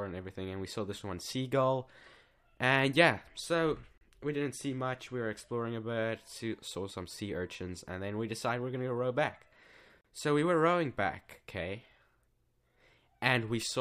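Brief dropouts of about 34 ms cut into continuous sound at 3.98 to 4.01 s and 10.01 to 10.04 s, six seconds apart, with smeared edges. They are gaps at joins of encoded pieces: untrimmed encoder start delay and final-frame padding left silence between separately encoded segments.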